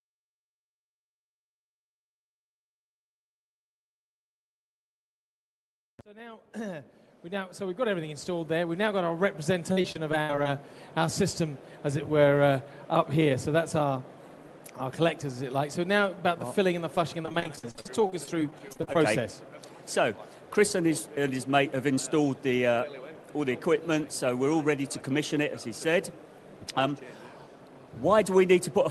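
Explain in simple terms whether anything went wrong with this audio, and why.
Two stretches of the sound break up with repeated packet loss (robotic sound), from 9.72 to 10.46 s and again from 16.96 to 18.96 s. Pieces of audio arrived late or not at all, and each hole was papered over by stretching the last bit heard, giving a choppy, robotic effect. About a quarter of each stretch is filler rather than real sound, with dropouts up to 72 ms in the first and 43 ms in the second.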